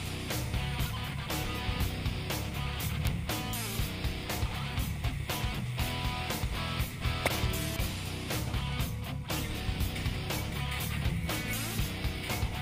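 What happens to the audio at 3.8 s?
Word clock ticks, 0.24 to 12.12 s: an unlocked receiver clock slips one sample about every half second, leaving sharp, uneven ticks around 3.8 s.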